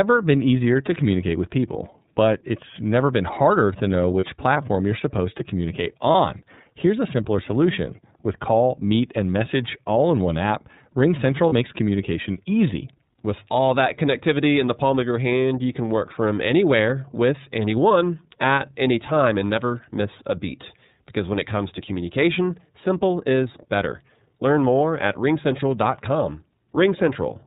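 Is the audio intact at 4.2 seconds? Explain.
No. A lost iLBC frame breaks the audio from 4.20 to 4.24 s, a 30 ms dropout that fits a single missing frame. The decoder concealed it by repeating the last pitch cycle blended with noise, so the gap sounds like a brief held, slightly buzzy vowel. Because each iLBC frame decodes independently, the speech recovers straight afterwards.

The whole clip also carries plainly audible iLBC codec damage. Nothing above 4 kHz passes, and the narrowband excitation coding, consistent with the 13.33 kbps mode, leaves the speech sounding slightly rough and synthetic.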